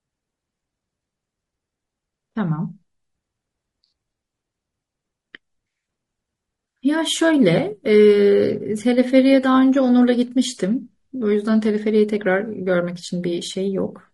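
From start to finish, the speech carries low-delay AAC compression damage, and it is plainly audible. Voices sound rough and grainy. Noise fills the gaps between pitch harmonics. The top band sounds dulled or synthetic. The likely cause is an AAC-ELD encoder of the kind used for video calls. Its very short frames cannot separate the harmonics cleanly, and the bits run out. The degree of damage fits a bitrate near 32 kbps.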